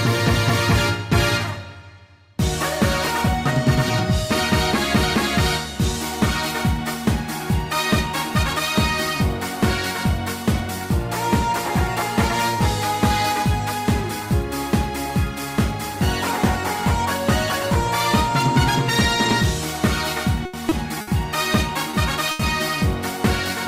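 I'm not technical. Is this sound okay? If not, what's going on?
No. The sound breaks up briefly near the end of the clip, from about 20.4 to 22.4 seconds.

Three times there is a burst of packet loss: at 20.45 to 20.55, 21.01 to 21.09 and 22.31 to 22.41 seconds. Small pieces of the audio got lost on the way or arrived too late. To cover each hole, the player keeps stretching the last sound it had and lets it fade. Then the audio jumps ahead. About 80, 60 and 80 milliseconds of real sound are gone.

Twice there is a short concealed packet loss: at 20.69 to 20.73 and 21.91 to 21.95 seconds. Each time, about 20 milliseconds never arrived in time. The player filled the gap by carrying on the previous sound and then blending back in. You hear it as a tiny smear or wobble. A very short sound in that spot can disappear.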